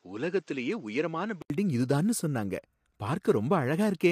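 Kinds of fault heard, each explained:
Low-delay AAC compression, throughout: speech sounds rough and grainy, with noise between harmonics, likely from AAC-ELD's short frames at a low bitrate, around 32 kbps.
Input switched to a poorer device, 0.0 to 1.5 s: dull, nothing above 7.8 kHz, quieter and noisier, then an 80 ms gap before "இது தான்னு சொன்னாங்க", likely an input change.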